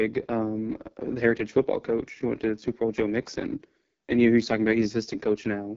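Rough and raspy from start to finish, with nothing above about 7.3 kHz. The speech is squeezed through the AMR wideband (HD Voice) codec at heavy damage, which fits its lowest 6.6 kbit/s mode, where the vocal-tract model breaks down.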